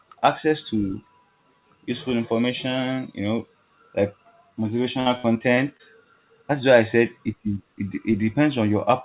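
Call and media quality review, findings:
Repeated packet loss (robotic sound), 5.0–5.81 s. Choppy speech. Five gaps, longest 59 ms, about 180 ms missing. Jitter buffer concealment stretches prior audio into each hole, filling 21% of the span. Band-limited to 4 kHz, consistent with G.711 at 64 kbps.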